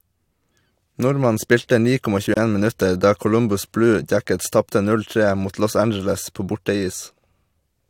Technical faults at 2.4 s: gap at a join of encoded pieces

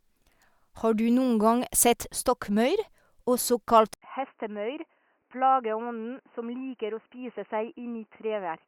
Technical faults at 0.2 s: none

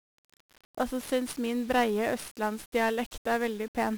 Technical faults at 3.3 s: 1-bit DFPWM compression

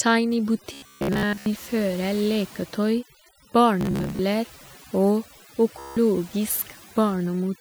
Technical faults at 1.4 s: overdone noise removal; Bluetooth stutter

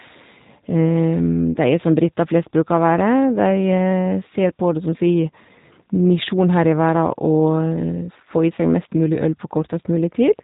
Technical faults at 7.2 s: G.729 codec

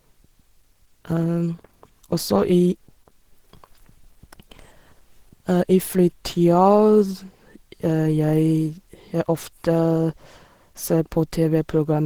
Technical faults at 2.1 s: Opus compression

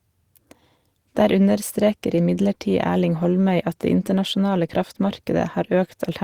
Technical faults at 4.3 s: none

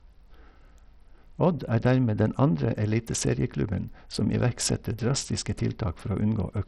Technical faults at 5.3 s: Bluetooth SBC compression

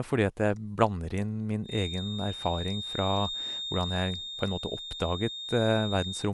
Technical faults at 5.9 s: Dolby Digital compression; feedback whistle

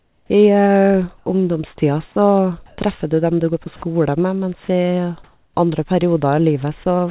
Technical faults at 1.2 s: sound dropped by the voice detector

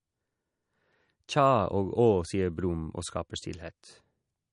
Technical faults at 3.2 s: MP3 compression

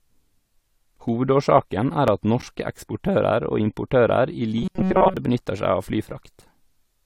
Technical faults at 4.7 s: periodic USB or driver dropouts; robotic sound from repeated short buffers

